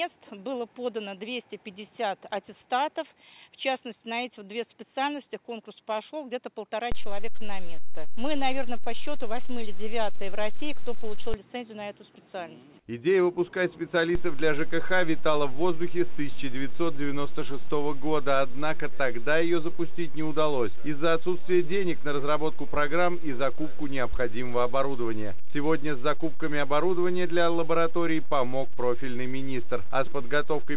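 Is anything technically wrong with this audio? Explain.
Yes. There are two DC steps, heard over a call-path sound that stops at 4 kHz, which fits a G.711 mu-law narrowband codec. At 6.92 s the waveform's zero line jumps to a new offset, which is gone by 11.34 s. At 14.15 s it jumps again and stays offset to the end. Such a shift comes from a converter recalibrating or an offset-carrying input being switched in. Each step is heard as a low thump or click while the sound continues unchanged.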